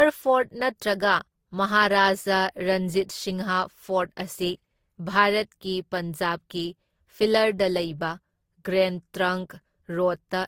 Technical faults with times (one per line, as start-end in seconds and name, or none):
0.00-10.47 transcoding between lossy codecs